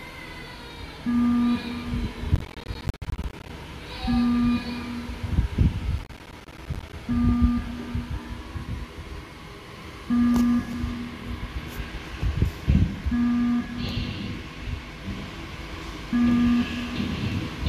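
A burst of gritty crackle tears through the sound from 2.35 to 3.50 s, and a shorter one returns from 5.98 to 6.93 s. This is processor overload crackle. The processor repeatedly failed to fill its small audio buffers, each roughly 10 ms long, before they were due. Dozens of deadlines were missed again and again over each stretch, and each miss dropped in a brief hard-edged silence. The rapid chain of gaps merges into the tearing texture, which stops once the load eases.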